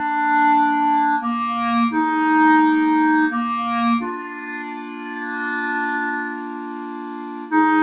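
Noise suppressor applied to music or sounds, running through the whole clip: a speech-oriented suppressor treats sustained tones, ambience and reverb as noise, so the level swings by roughly 15 dB. Attacks survive while held material and tails are pulled down, giving a pumping, thinned texture over audio that already stops at 4 kHz, as a narrowband call codec such as G.711 would.

Sound cut by the noise suppressor, from 4.16 to 5.69 s and again from 6.0 to 7.53 s: each stretch of about 1.5 s is judged to be noise and ducked by up to about 9 dB beyond the general pumping. Its sustained or decaying parts sink and tails end early, while sharper onsets come through.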